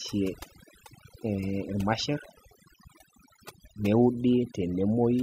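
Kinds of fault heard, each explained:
overdone noise removal: A noise reduction stage was driven far too hard, so any frequency band sitting close to its noise estimate gets pushed down or switched off, and softer parts of the speech are cut along with the noise. Across the whole clip the background falls to near silence dotted with twinkling specks, while the speech has its quieter detail stripped away with the noise it was meant to remove.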